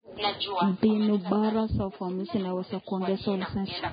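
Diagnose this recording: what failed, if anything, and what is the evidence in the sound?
Codec stage: low-bitrate audio was likely saved at a high bitrate, so the speech stays empty above 4.9 kHz throughout, a loss re-encoding cannot restore.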